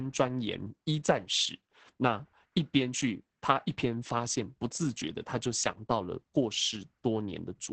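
This speech clip carries Opus voice compression from start to finish. Nothing is heard above about 8.6 kHz, so the top of the sound is cut away. That narrow, wideband-only range and the coarse texture point to the SILK coder at a bitrate around 10 kbps. At that rate the excitation is coded roughly. The damage is heavy. The speech sounds muffled and hoarse, with a slightly robotic edge throughout.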